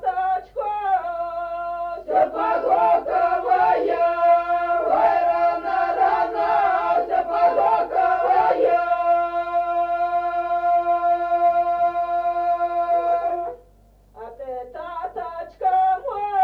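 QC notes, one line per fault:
No faults heard.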